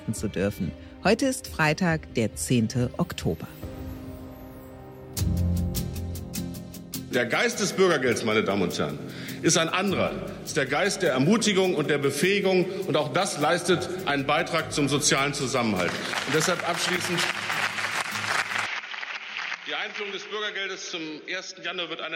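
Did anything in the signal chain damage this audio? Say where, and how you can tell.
Yes: input switched to a poorer device at 18.66 s, likely at the driver stage. The level falls about 10 dB and nothing above 6.7 kHz remains, with no gap.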